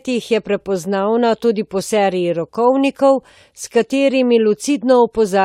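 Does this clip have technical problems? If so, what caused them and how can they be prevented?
No, nothing in this speech clip needs fixing, so there's no problem to trace back or prevent.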